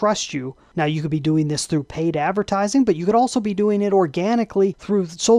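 No audible technical faults anywhere in the recording.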